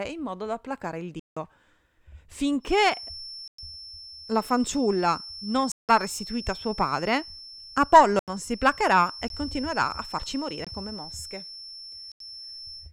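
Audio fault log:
1.20–1.37 s, 3.48–3.58 s, 5.72–5.89 s, 8.19–8.28 s, 9.28 s, 10.65–10.67 s, 12.12–12.20 s, block of digital silence: the speech drops abruptly to dead silence and returns. The 170 ms and 85 ms holes fit 8192- and 4096-sample output buffers left unfilled.
2.59–12.93 s, feedback whistle: a thin, steady 5.4 kHz whistle sits roughly 15 dB below the speech and swells and fades slowly in level until the end. This is likely a loudspeaker-to-microphone loop held just short of runaway feedback, so one frequency rings on.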